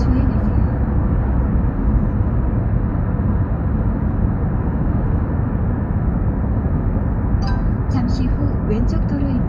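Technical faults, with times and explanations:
No technical faults detected.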